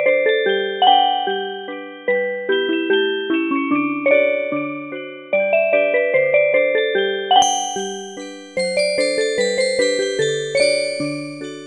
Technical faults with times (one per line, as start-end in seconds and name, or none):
0.00-7.42 input switched to a poorer device